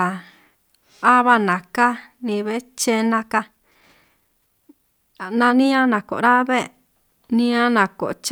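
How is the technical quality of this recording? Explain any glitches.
There's one glitch. From 3.1 to 6.24 s there's a time-stretched section: the speech suddenly runs about 1.35 times faster at the same pitch, sounding rushed, likely from software dropping short slices to shorten it.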